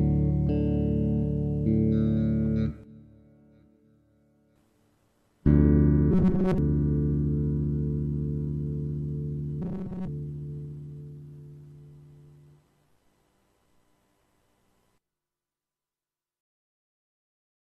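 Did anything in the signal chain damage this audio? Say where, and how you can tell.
Yes. The damage is in the driver or buffer stage. From 6.11 to 6.58 s, and again from 9.62 to 10.08 s, the sound turns into a rigid, metallic buzz at 188 Hz. That is robotic sound from repeated short buffers. The likely cause is audio arriving too seldom, so the software replays a slice of about 5.3 ms to fill the gap. Most of the real audio in those stretches is skipped. The replays impose a fixed buzz at 188 Hz.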